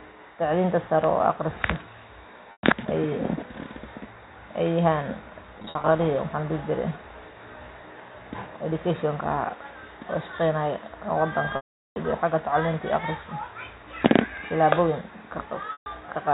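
Packet loss with pitch repetition occurs at 2.52, 5.58, 11.56 and 15.72 s. Missing packets were bridged by repeating the last pitch period, so the telephone-band G.711 speech briefly turns into a held, buzzy tone. The 400 ms gap at 11.56 s fades to silence before speech cross-fades back.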